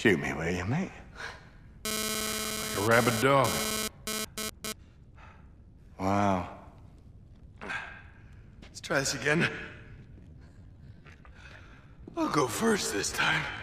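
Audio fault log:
1.85 to 4.72 s, GSM phone buzz: a hard, raspy buzz at about 217 Hz with a stack of harmonics cuts in, sitting only about 2 dB below the audio itself, so it's hard to miss. It stutters on and off rather than holding steady, which points to a nearby 2G phone pushing data in bursts. The audio circuitry rectifies those radio pulses into sound that has nothing to do with the program.
10.19 to 13.63 s, time-stretched section: from here to the end, the pace suddenly drags to roughly 0.72 times normal speed while the pitch stays put. That's likely software stretching this stretch of audio to fill a length, holding pitch by duplicating short slices instead of simply slowing the playback.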